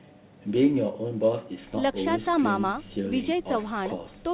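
Nothing goes wrong in this speech clip; it just carries the usual narrowband sound of a phone-style call codec, with nothing above about 4 kHz, and that's how such a call path normally behaves.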